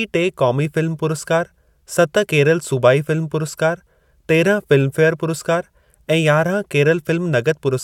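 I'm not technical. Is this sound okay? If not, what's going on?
Yes, this sound is okay; nothing is going wrong in it.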